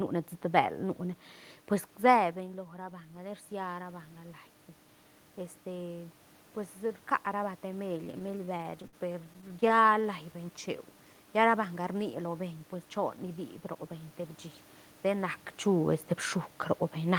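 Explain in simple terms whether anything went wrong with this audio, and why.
Three things went wrong with the transmission of this speech.

From 3.12 to 6.04 s there is automatic gain rising. The incoming speech had become much quieter, so the system slowly turned its volume up over about three seconds. The voice and the room noise behind it swell together, which is the giveaway that this is the gain control and not the talker.

From 7.97 to 10.05 s there are repeated stalls (stutter). Audio packets kept arriving too late, so playback ran dry about 30 times. Each time, the receiver stretched out the last bit of sound, for up to 56 ms, until fresh audio arrived. Nothing is lost, but roughly a fifth of that stretch is filler, so the speech drags and stutters.

From 10.32 to 10.67 s comes a jitter buffer slow-down. The receiver was rebuilding its reserve by repeating tiny slices of the sound. 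That adds about 47 ms and plays the passage at 88% speed with unchanged pitch, so the sounds come out drawn out.

The level changes around 2 s and 15 s come from the talker shifting position relative to the microphone, and the steady background is ordinary room noise. Neither is a system fault.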